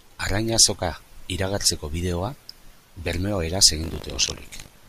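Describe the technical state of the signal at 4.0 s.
Buffer tearing runs from 3.82 s to the end of the clip, covering 4.0 s. The write and read positions in the ring buffer have slipped, so a small slice of each period replays speech from roughly 70 ms earlier, producing a 50 Hz rattle, which fits a 20 ms buffer.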